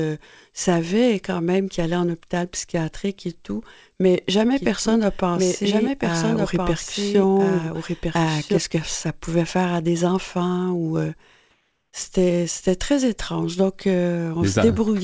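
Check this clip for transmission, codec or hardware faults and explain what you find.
Two things stand out in this speech clip, which has come through a wideband call path with nothing above 8 kHz.

From 4.55 to 8.58 s there's a doubled audio track: a second full-band copy trails the original by around a second and a half, about 5 dB quieter, with no room colour and abrupt edges. Likely a second capture path or an edit leaving two offset copies.

From 11.51 to 11.93 s, about 420 ms, there's comfort noise in place of the background. The real room sound, sitting about 50 dB below the loudest speech, turns into a flat, featureless hiss about 1 dB quieter. That likely comes from the sender pausing transmission in silence while the receiver fills the gap with synthetic noise.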